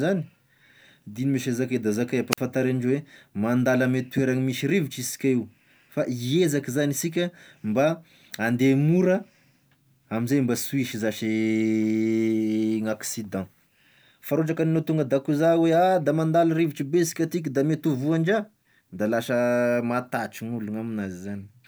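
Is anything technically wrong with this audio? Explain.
Yes. From 2.31 to 2.38 s there is a wireless microphone squelch dropout: the radio signal fades, hiss swells, then the receiver's squelch mutes the speech for 45 ms, showing as a flat waveform gap and a blank spectrogram column.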